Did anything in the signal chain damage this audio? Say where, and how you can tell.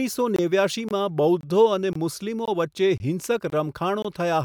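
Yes: there is a gap between chunks, heard as hard-edged 23 ms holes at 0.36–0.39, 0.89–0.91, 1.41–1.43, 1.93–1.95, 2.45–2.48, 2.98–3.00, 3.50–3.52 and 4.02–4.05 s. The speech arrives in 0.5 s blocks, and the streaming or playback stage inserts silence at each join instead of butting the blocks together.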